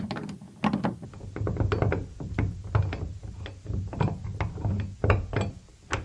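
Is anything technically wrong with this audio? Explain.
Yes. From 1.05 s to the end, the clip has a wrong sample rate fault. The samples are played back at about half the rate they were captured at, with no conversion, which fits 44.1 kHz material being run at 22 kHz. Speed and pitch both drop by the same ratio, so everything runs at 0.5× speed and sits 12 semitones, one full octave, lower, sounding sluggish and deep. On a spectrogram, all energy slides down to half its frequency and features stretch to twice their duration. In the waveform, each cycle and envelope becomes twice as long.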